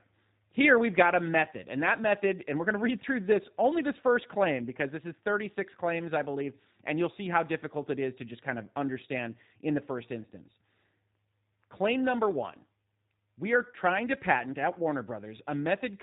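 Throughout, the speech carries plainly audible G.729 codec damage, sounding rough and synthetic; a spectrogram shows an empty band above 4 kHz, consistent with 8 kbit/s G.729A.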